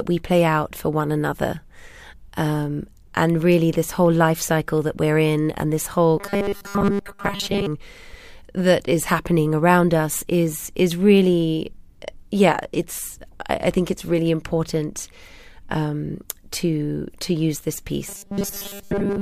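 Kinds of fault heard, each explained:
Robotic sound from repeated short buffers: after "in and this whole" and "to to use this", speech becomes a rigid metallic 200 Hz buzz, likely a 5 ms chunk replayed while most audio is skipped; spectrograms show evenly spaced stripes, waveforms short repeating cycles.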